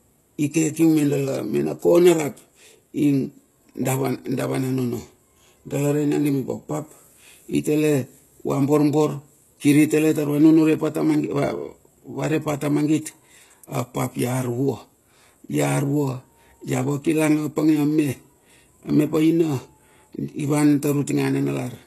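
HE-AAC compression runs throughout this speech recording, likely from a low-rate encode consistent with about 16 kbps: the treble is rebuilt from copied lower bands, so sibilants sound gritty, and nothing reaches above 12.3 kHz.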